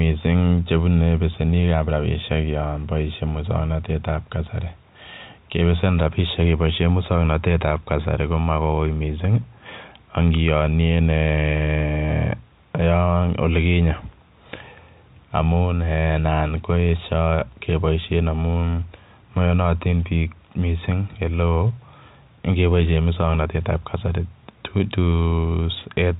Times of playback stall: none

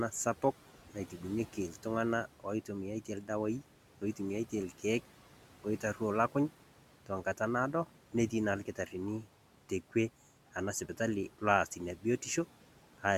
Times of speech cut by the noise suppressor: 0.42-1.85, 2.40-4.84, 5.64-6.35, 7.06-9.95, 10.54-12.04

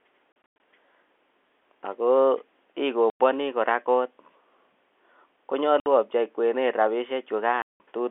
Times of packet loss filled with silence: 0.32-0.60, 3.10-3.19, 5.80-5.86, 7.62-7.80

